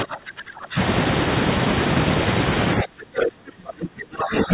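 From 0.03 to 0.77 s the speech is pulled down hard, by roughly 25 dB at its deepest, and then recovers. From 2.83 s to the end it sinks again, by roughly 30 dB. This is likely speech suppressed in double talk. With both ends talking at once, the echo canceller could not separate the near talker from loudspeaker echo, so it attenuated everything it picked up.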